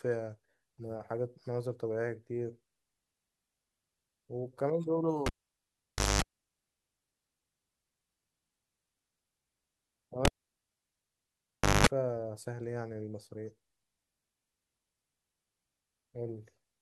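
A speech recording in which a live cable is pulled and plugged in twice, at 5.26 to 6.22 s and again at 10.25 to 11.87 s. Each time a pop breaks the connection, the signal drops to near silence for about 0.9 s and then 1.56 s, and a roughly 0.21 s burst of 50 Hz mains buzz follows while only the plug tip makes contact. A second pop marks full reconnection as the audio returns.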